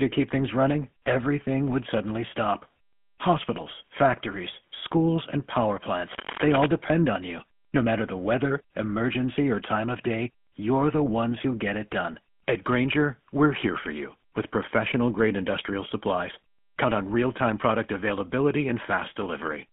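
The speech runs through the GSM full-rate codec for its whole length, audible as a band-limited line of roughly 150 Hz to 3.4 kHz, a sound that fits the 13 kbps full-rate coder. That coder rebuilds speech from a vocal-tract filter driven by a sparse, regularly spaced pulse train, so fine excitation detail is thrown away. The result here is a plainly audible buzzy, gravelly roughness laid over every syllable, with no top end.

At 3.53 to 3.61 s come GSM bit errors: a brief squawk and gargle lasting about 70 ms. Corrupted bits have reached the decoder and scrambled its filter, pitch or gain parameters, so a handful of frames are rebuilt with a bent spectrum and an unstable level. The pattern points to roughly four damaged frames.

From 6.09 to 6.66 s, cable scratch noise sits over the speech as dense, uneven bursts of scratching and rustling, only a little below the speech level. The likely cause is a worn cable, connector or control being moved, its contact resistance jumping rapidly and injecting noise for just over half a second.

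A second burst of GSM bit errors follows at 6.86 to 6.90 s, shorter and milder than the first. It is a quick pop and gargle of corrupted decoding, consistent with about three frames hit.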